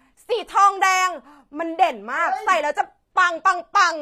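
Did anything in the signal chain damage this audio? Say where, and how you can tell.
Yes, at the codec stage, and throughout the speech. The treble is bright but synthetic: s sounds come out gritty and lispy, and nothing is present above 14.9 kHz. This is likely HE-AAC compression, at a rate that fits about 24 kbps. The coder keeps only the lower spectrum and rebuilds the top by copying lower bands upward under a coarse envelope. A plain low-pass or an ordinary codec would dull the treble, while here it is present but metallic and misaligned.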